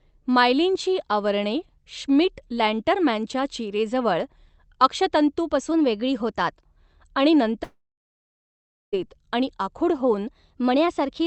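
A clock-matching routine in this speech recording, carried over a call link band-limited to about 8 kHz, likely stepped its playback rate to correct drift. From 5.72 to 6.53 s the audio runs about 6.4% fast and rises roughly a semitone before snapping back. The same drift correction step recurs from 10.27 s to the end, just after "आणि आखूड". Between 7.63 and 8.95 s, a long network dropout likely cut off about 1.3 s of audio. The last sound is stretched into a fading fill, then about 1.2 s of silence follows, and the audio resumes at "आणि आखूड" with that stretch missing.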